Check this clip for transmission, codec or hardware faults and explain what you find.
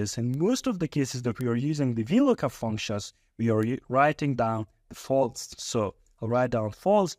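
Three bit error spikes turn up, at 0.34 s, 1.41 s and 3.63 s. Each is a single sample knocked out of place, almost certainly a flipped bit in memory or on a digital link, so the value jumps by a power of two and snaps straight back. You hear each one as a tiny, bright tick with no relation to the surrounding sound. The first peaks around -21 dBFS. The later two hit about -15 dBFS, so they're about 6 dB higher.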